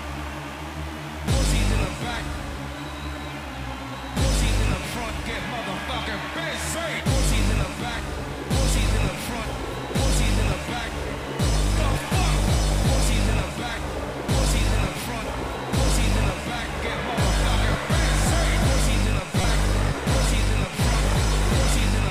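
At 19.41 to 19.44 s there is a brief burst of damaged data in a compressed stream, lasting about 32 ms. Part of the encoded data at that point was corrupted, so the decoder could not read those frames correctly, lost its lock on the frame structure and had to resynchronise on the next valid frame header. The result is a short glitch in the audio, after which normal playback resumes.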